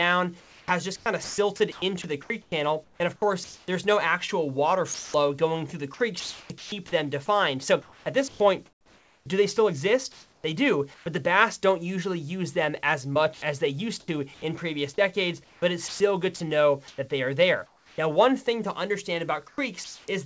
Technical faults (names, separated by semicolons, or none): sound chopped by the voice detector; sound dropped by the voice detector; comfort noise in place of the background